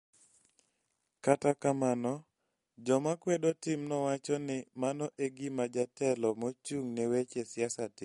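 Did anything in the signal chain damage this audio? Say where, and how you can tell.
Yes. Damage runs through the whole clip and is plainly audible: the speech has a watery, swirling quality, and sibilants turn into metallic chirps. The likely cause is MP3 compression at the codec stage, starved of bits in a way that fits a rate near 48 kbps. The encoder drops the treble entirely, so a spectrogram shows a hard ceiling at 11.2 kHz, with scattered bright and dark blocks below it where weak frequency lines switch on and off between frames.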